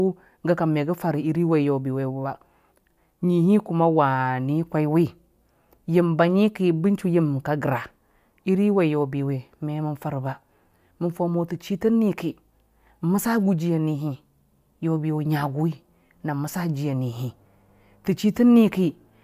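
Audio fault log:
No faults detected in playback.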